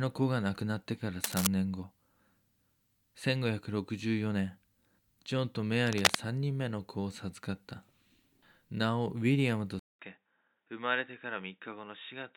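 Cable scratch noise at 1.24 to 1.47 s and 5.86 to 6.15 s: dense, uneven rustling bursts, about as loud as the speech and then louder, likely from a worn cable or connector being moved. An input switched to a poorer device at 9.79 s: after 0.2 s of silence the speech turns dull and boxy, with nothing above 3.8 kHz, about 10 dB quieter, over a faint new noise floor, likely from a change to another microphone or a headset's call profile.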